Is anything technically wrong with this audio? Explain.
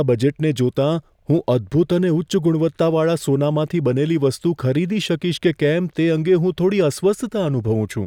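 No, nothing is technically wrong with this audio.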